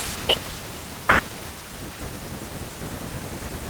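No audible faults present.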